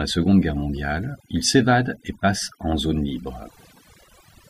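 Overdone noise removal runs through the whole speech clip. An overly aggressive noise reducer has pulled frequency bands near its noise estimate far down. On a spectrogram the gaps between words look nearly empty, flecked with isolated bright dots. Those dots are heard as twinkling specks. Weaker voice harmonics are clipped away.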